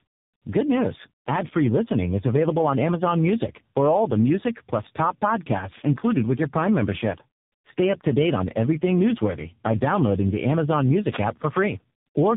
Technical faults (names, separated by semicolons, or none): tandem speech coding; wireless microphone noise hit